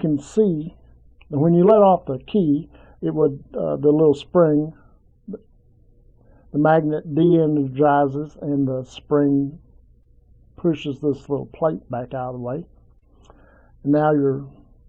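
Short concealed packet loss occurs three times in this audio: at 8.27 to 8.31 s, at 10.03 to 10.07 s, and at 12.99 to 13.04 s. The first two gaps lost 20 ms of audio, and the last lost 40 ms. The decoder covered each hole by extending the preceding sound, then blended back into the real signal. Each gap is heard as a brief smear or wobble.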